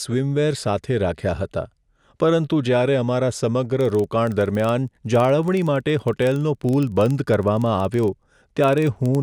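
A speech recording in which, from 3.81 s to the end, a filter restarted on every block adds a steady buzz of about 21.5 Hz that rises and falls with the speech level. Each restart from zero state leaves a small transient, and the tick rate fits a 2048-sample block.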